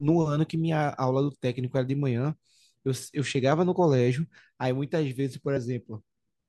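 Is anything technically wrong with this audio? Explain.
Yes. This speech has compressed frames skipped twice: at 0.49 s, about one 24 ms frame, and at 5.56 s, about two. Missing or rejected frames make the decoder jump ahead, so the sound lurches forward.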